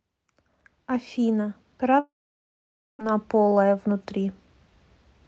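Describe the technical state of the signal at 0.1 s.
At 0.1 s the speech is intact, with no dropout, glitch or other fault, only the ordinary band-limited character of the WebRTC call path it passed through.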